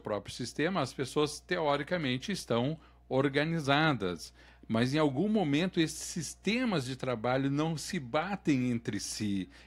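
Mains hum runs under the speech from start to finish: a steady low tone at 60 Hz, sitting roughly 30 dB below the speech level. It comes from the power line coupling into the signal path, through a ground loop in the cabling or induction from a nearby transformer. The tone doesn't change during the clip, so it stays audible as a constant drone in pauses between phrases and is partly masked while speech is present.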